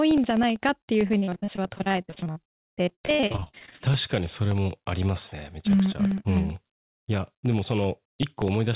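Periodic USB or driver dropouts run from 0.11 s to the end of the clip: every 64 ms a sliver of audio is lost and replaced by silence, as something blocks the USB bus or audio driver on a fixed cycle. The speech carries a steady train of ticks.

Repeated packet loss (robotic sound) covers 1.08 to 3.89 s. Many gaps, the longest 65 ms, are patched by stretching the last sound, so about 43% of that span is concealment. The speech turns choppy, with pieces missing, heard through band-limited call audio with nothing above 4 kHz.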